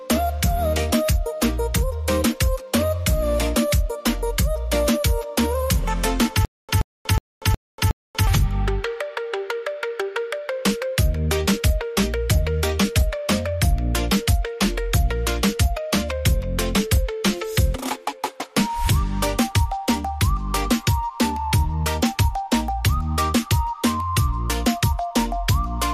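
From 6.45 to 8.27 s there is a stutter with silent gaps: a 0.13 s burst of sound repeats five times, each followed by about 0.24 s of digital silence, a 0.37 s cycle. This likely comes from a stalled stream replaying its last fragment. The waveform shows identical blocks separated by flat silent gaps.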